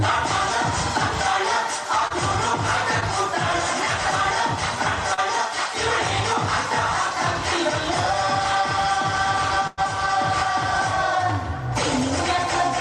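Short concealed packet loss occurs three times, at 2.07–2.12 s, 3.00–3.03 s and 5.14–5.19 s. Each time, a sliver of audio (20 ms at the first two, 40 ms at the third) failed to arrive, and the receiver patched it by extending the preceding sound before easing back into real audio. Each patch is a quick smear or wobble. On a spectrogram the frequency bands run briefly flat and frozen, and the waveform shows repeated cycles or steady noise instead of natural variation.

A burst of packet loss spans 9.67–9.79 s. About 100 ms of audio went missing, and the receiver filled roughly the same length by stretching the last sound out and letting it fade, so it reads as a held buzz or hiss with no silence. The audio then resumes further on, with the lost section skipped. A spectrogram shows steady stripes dimming toward the jump, and the waveform shows a repeating pattern or noise under a shrinking envelope.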